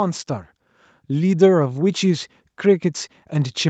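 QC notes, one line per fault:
0.95–3.69 s, automatic gain rising: speech and background swell together to the end, because the gain control judged the input too quiet and steadily raised its level.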